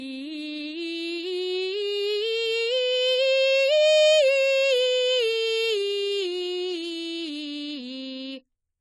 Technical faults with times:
0.00-8.81 AAC compression

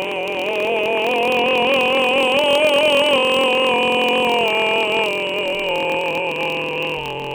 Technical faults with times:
0.00-7.34 block size mismatch (padded)

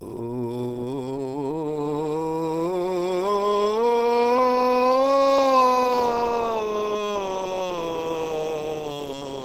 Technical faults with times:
0.00-9.44 Opus compression

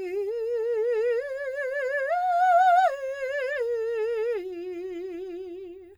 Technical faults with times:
none

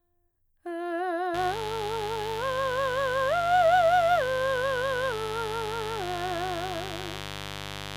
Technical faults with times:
1.34-7.97 mains buzz

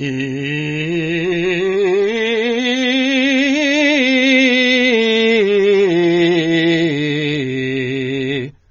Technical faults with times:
0.00-8.70 AAC compression

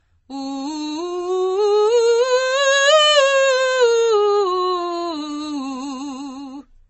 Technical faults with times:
0.00-6.89 transcoding between lossy codecs

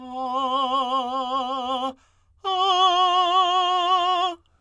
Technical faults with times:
none

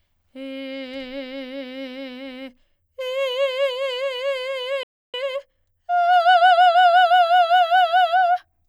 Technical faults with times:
4.83-5.14 playback stall
5.14-7.16 time-compressed catch-up

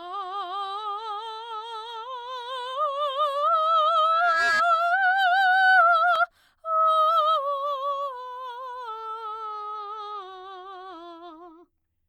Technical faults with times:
4.11-4.63 loudspeaker feedback squeal

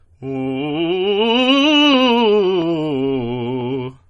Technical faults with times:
0.00-4.10 MP3 compression

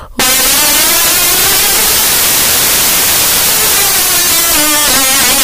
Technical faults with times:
0.00-5.43 samples built from the wrong bytes

